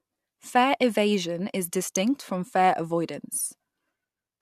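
No technical faults occur at any point in the speech, so there is nothing to describe in time order.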